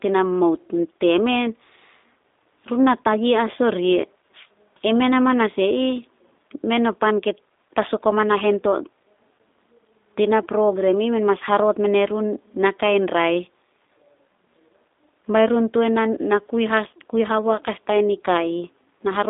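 Speech carried through a G.729 codec for its entire length, with plainly audible coding damage: the band runs from about 250 Hz to 3.7 kHz, nothing passes above 3.8 kHz, and the voice sounds rough and synthetic from being rebuilt from a filter, pitch predictor and sparse pulses, which fits an 8 kbit/s G.729A link.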